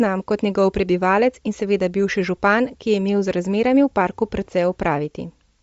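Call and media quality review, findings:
Bluetooth LC3 compression, throughout: likely low-bitrate LE Audio link, consistent with 32 kbps and 10 ms frames. Upper spectrum zeroed and noise-filled, nothing above 7.7 kHz. Speech plainly degraded: breathy, grainy edge on voiced sounds, dull top end.

Dropped samples, 2.28 s (just after "in seveda bivši") and 3.28 s: likely stream discontinuities, each losing a fraction of a millisecond. Waveform jumps to a later value, producing a single sharp click, a thin vertical line across the spectrum. No audible content lost.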